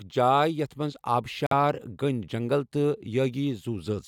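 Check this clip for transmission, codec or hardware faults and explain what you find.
One fault turns up in this speech clip: a Bluetooth stall from 1.47 to 1.53 s, just after "یتھ منٛز". It is likely caused by radio interference that delayed packets on the wireless link, so the headphones' buffer emptied and playback had to wait for the retransmitted data before continuing. The sound drops to silence for about 48 ms, a short hard gap inside the speech, and then resumes.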